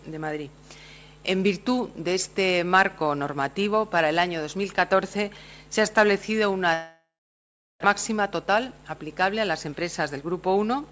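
From 6.74 s to 7.86 s the sound decays into a fading buzz, then about 0.72 s of silence, and resumes with part of it gone. This is a long network dropout, likely lost packets: 1 s of audio never played, and concealment filled the gap.

From 8.42 s to 8.96 s the audio runs 9% fast at unchanged pitch and sounds briefly hurried. This is a jitter buffer speed-up: to shrink a backlog of queued audio, the receiver trimmed short pitch-period slices, roughly 50 ms in total.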